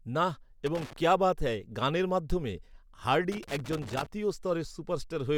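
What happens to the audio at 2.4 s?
Nothing goes wrong at 2.4 s; the speech runs through that moment intact, with no dropout, click, glitch or other fault.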